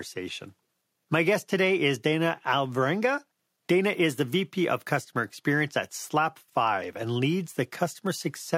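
Nothing technically wrong turns up anywhere in this bit of speech, so there's no fault to point to and no cause to chase.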